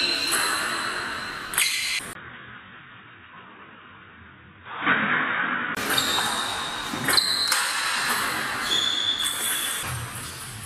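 At 2.13 s there is a 20 ms gap, then dull sound with nothing above 3.8 kHz until 5.77 s, as the input likely switched to a poorer device.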